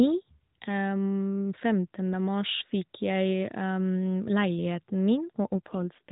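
At 5.54 s an AMR rate drop begins and lasts to the end of the clip at 6.12 s. Before it, the speech has the light roughness of narrowband AMR-NB, with nothing above 4 kHz. After it, the speech turns buzzier and more synthetic. The band stays the same and no gap appears. Fewer bits now describe each frame, which fits a switch from 12.2 to 5.9 kbps. A network makes that trade to protect a weak radio link.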